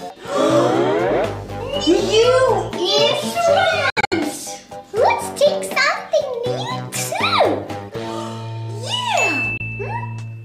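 Brief silent holes break the sound from 3.90 to 4.13 s, where about 150 ms goes missing in several gaps (the longest about 64 ms), and again at 9.57–9.61 s. Sound resumes as if it had played on. This is likely a Bluetooth dropout: late packets were discarded.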